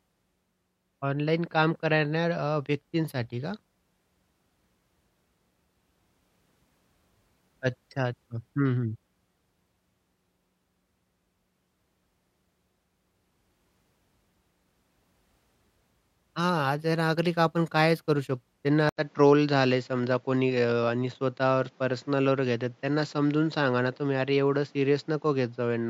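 Input switched to a poorer device at 18.89 s: after a silence of 80 ms, the speech carries on through what is likely a different microphone or a headset's call profile, and stays that way to the end. That path passes nothing above 7.6 kHz, so the top end goes dull and boxy, and a new background noise sits about 35 dB under the signal, while the overall level stays much the same.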